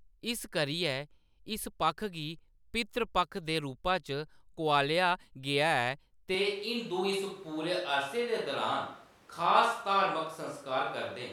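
A speech recording that abruptly changes character at 6.35 s: from there to the end the sound turns roomy and hollow, with thinner bass and an audible room noise bed about 30 dB below the speech, while the overall level stays roughly the same. This is a switch to a distant microphone, likely because the close microphone's signal dropped out and a pickup farther from the talker, such as a camera microphone, carried the rest of the recording.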